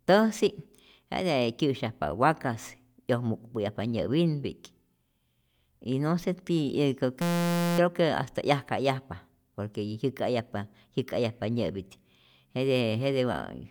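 System hang loop from 7.22 to 7.79 s: a frozen driver left the hardware replaying one 5.8 ms slice, which fits a 256-sample buffer, producing a steady 172 Hz buzz.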